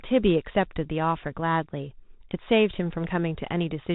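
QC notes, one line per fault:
Throughout, Bluetooth CVSD headset codec: the speech is boxed into a narrow telephone-like band with nothing above 4 kHz, a grainy hiss sits under every phrase, s sounds come out scratchy, and louder bright passages smear into distortion. The codec sends a single up-or-down bit per sample and adapts its step size, so quick high-frequency swings outrun the step and the slope overload is plainly audible, which fits a 64 kbps CVSD headset link.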